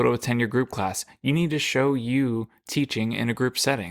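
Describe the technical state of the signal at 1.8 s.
At 1.8 s the speech signal is intact, with no audible technical fault at that moment.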